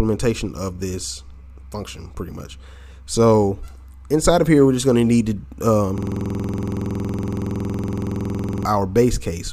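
A system hang loop runs from 5.98 to 8.65 s: the system froze while the audio hardware kept replaying one 46.4 ms slice of its ring buffer, which fits a 2048-sample buffer. That slice repeats 58 times at 21.5 Hz, heard as a rapid, mechanical stutter.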